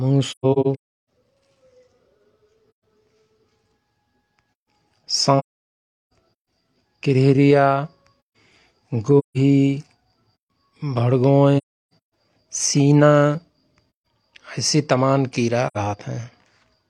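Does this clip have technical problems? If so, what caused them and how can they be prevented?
Yes: AAC frame loss with muting silences the speech at 0.31–1.08, 2.71–2.84, 5.38–6.13, 9.18–9.37, 11.58–11.93 and 15.67–15.77 s. The decoder zeroes lost frames, which fits frames of about 43 ms, and overlapping windows fade each hole softly, unlike a clicking hard dropout. Using error-resilient transport with retransmission or forward error correction prevents it.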